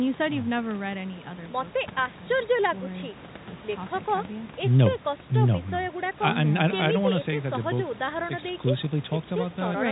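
No faults in this speech clip: room noise sits about 19 dB below the speech, and the content stops at 4 kHz, which fits a narrowband G.711 mu-law call path at 64 kbps.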